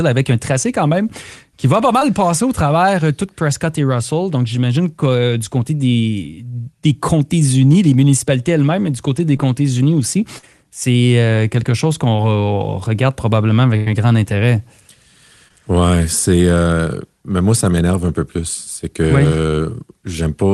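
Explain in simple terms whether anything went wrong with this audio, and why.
Two kinds of fault are audible. Short concealed packet loss happens at 1.99, 9.37, 10.38, 12.17 and 15.48 s. Tiny pieces went missing, and the receiver papered over each one, leaving a brief smear or wobble. A burst of packet loss runs from 13.76 to 13.88 s. About a tenth of a second was lost. The receiver stretched the last sound and faded it down, then jumped ahead with that stretch missing.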